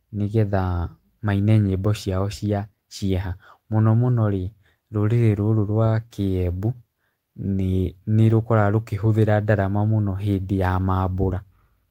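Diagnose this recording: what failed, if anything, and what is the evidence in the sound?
Nothing in this speech recording points to a failure at any stage of the chain. There are no audible events to diagnose and no evidence in the sound to report.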